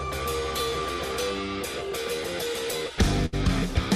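Right near the end, from about 3.26 to 3.34 s, there's a burst of packet loss. The receiver papers over a 68 ms gap by stretching the last bit of sound and fading it down, then picks up again with roughly 60 ms of audio just gone.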